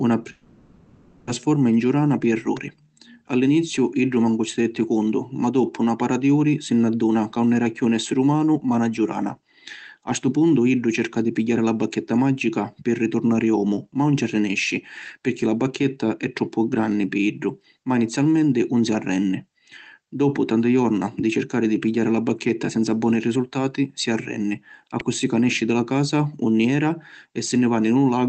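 A speech recording with three technical faults. From 0.31 s to 1.29 s there is a long network dropout, likely caused by a lapse in packet delivery: for about 0.96 s no new audio is heard. The receiver fills the whole gap by stretching the last sound into a buzzy, hissing continuation instead of leaving silence, and the speech then resumes with that stretch missing. On a spectrogram the band shows smeared, repeating texture with no syllable structure, and the waveform shows a smooth, featureless envelope. At 2.57 s and again at 25.00 s there is an electrical switching spike, a sharp snap laid over the speech. These are heard as arcs that the audio line likely picked up from a nearby switch, motor or static discharge. Each appears on the waveform as a needle-thin excursion and on the spectrogram as a thin vertical line spanning all frequencies. The clip went through an Opus call path, so the spectrogram's energy stops at about 8 kHz.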